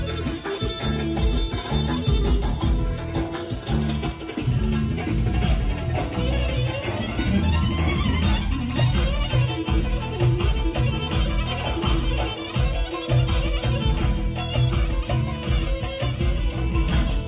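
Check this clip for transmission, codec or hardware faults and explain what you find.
No transmission or hardware faults.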